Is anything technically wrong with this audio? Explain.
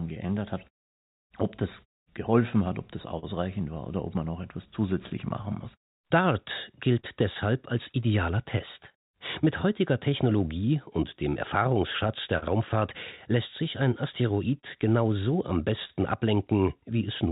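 Yes. The clip has timing and concealment faults typical of a call link whose two ends disagree on time.

Clock drift between sender and receiver runs through the whole clip. The sending clock appears to run roughly 3% slow, so the receiver's jitter buffer keeps draining. The receiver therefore has to stretch the audio, and it can also run short of data at moments. The result is small, uneven timing hiccups rather than one obvious defect.

Repeated timing corrections, from 0.27 s to 17.3 s, are how that drift is handled. The receiver keeps repeating short slivers of audio, always lengthening and never cutting, at irregular spacing. Playback runs at about 99% speed and adds something like a fifth of a second in total. Each edit is tiny, so the speech carries a faintly unsteady tempo with occasional slight stutters rather than clear glitches.

A short stall from a late packet occurs at 0.67 to 0.74 s and again at 3.19 to 3.25 s. 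In each case a packet missed its slot and the buffer ran dry. The receiver held the last sound for 45 ms and 38 ms respectively until data arrived, then resumed from the same point. Nothing is lost, but a sound lingers a touch too long with a faint buzzy or dipping quality.

Scattered short gaps appear between 5.09 and 8.95 s and again between 12.07 and 15.91 s. Each stretch has about seven isolated late or lost packets, none longer than about 40 ms. The receiver bridged each hole by extending the preceding sound, covering only a few percent of each span. The speech stays intelligible but picks up brief ticks and small smears. The narrow band, with nothing above 4 kHz, comes from the call path and fits a 64 kbps G.711 link.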